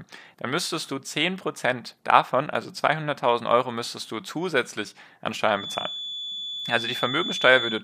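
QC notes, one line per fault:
5.50–7.83 s, feedback whistle: The loudspeaker-to-microphone loop has likely drifted to the edge of instability, with just enough gain at one frequency to keep it circulating without building into a full howl. Right after "müsstest du zusätzlich an", a thin, steady tone near 3.4 kHz appears behind the speech, around 10 dB below it, swelling and fading slowly in level and holding on to the end of the clip.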